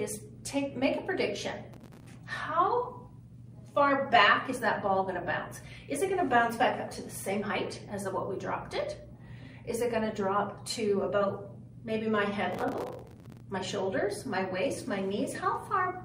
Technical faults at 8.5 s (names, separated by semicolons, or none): none